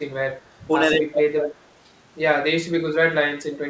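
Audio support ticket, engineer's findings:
Speech suppressed in double talk: brief dips of about 10 dB at 0.43–0.48 s and 1.11–1.17 s, and a deeper cut of about 25 dB at 3.41–3.58 s. Likely the echo canceller attenuating near-end audio while the far end talked.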